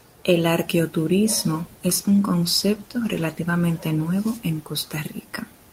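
From 1.97 s to 4.71 s there is a call bitrate drop. The speech turns coarser and rougher. This fits the encoder being pushed from 32 down to 16 kbps after the bandwidth estimate fell. The worst stretch lasts about 1.4 s before quality recovers.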